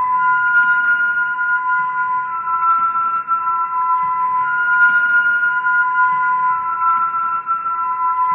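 No technical faults are audible.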